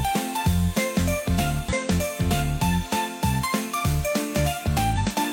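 Short glitches break in at 1.69 to 1.73 s and again at 4.93 to 4.98 s, about 44 ms and 54 ms long. This is damaged data in a compressed stream: corrupted bytes made the decoder misread frames and lose sync until it locked onto the next frame header.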